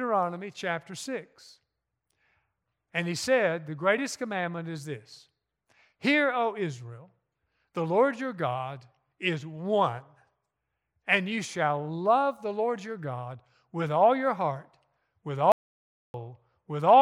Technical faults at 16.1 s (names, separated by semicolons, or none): audio dropout to silence